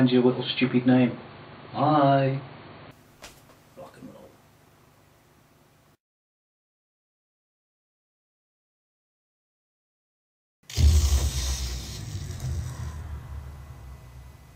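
For the first 2.91 seconds the audio sounds dull and boxy, with nothing above about 4.5 kHz, a level a few decibels different from what follows, and separate background noise sitting roughly 30 dB below the signal. At 2.91 s the full bandwidth returns abruptly, with no gap. That pattern points to an input switched to a poorer device, likely a narrowband headset profile or secondary microphone, before the recording moved to the better input.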